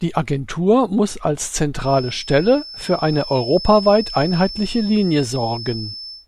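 A speech recording carries a feedback whistle from 1.76 s to the end at 6.27 s. It is a thin, steady tone near 5.3 kHz, about 15 dB below the speech, swelling and fading slowly in level. The likely cause is a loudspeaker-to-microphone loop held just short of runaway.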